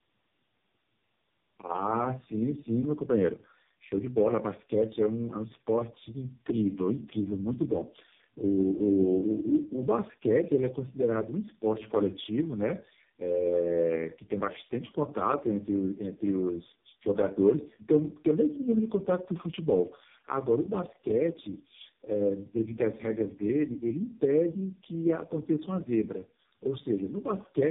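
Throughout, the speech shows tandem speech coding: it passed through about three narrowband speech codecs in a row, each re-encoding the previous one's degraded output. The result is rough, muffled and warbly, with nothing above 3.7 kHz, worse than any single codec would leave it.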